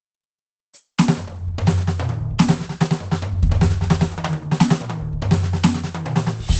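Music heavily squeezed by what is likely Opus compression at a very low bitrate, with the encoder in its speech-oriented SILK mode. Throughout, nothing is heard above about 8.7 kHz, and the plainly audible codec damage leaves the music muffled and hoarse.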